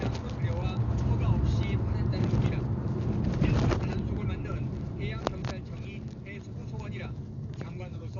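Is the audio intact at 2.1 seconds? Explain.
No, at 2.1 seconds, as across the whole clip, there's heavy damage that's likely from Dolby Digital compression at a very low bitrate, something like 48 kbps. The band stops around 6.9 kHz, and starved frequency lines get filled with noise, so it's dull, with rough fluttering around tones.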